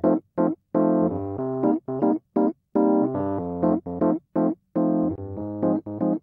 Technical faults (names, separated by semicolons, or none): Bluetooth dropout